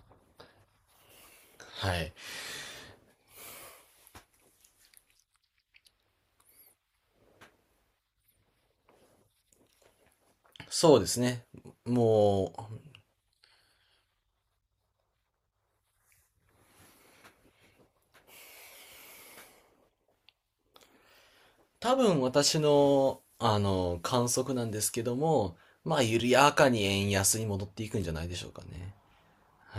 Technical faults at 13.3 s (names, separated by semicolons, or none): drift correction step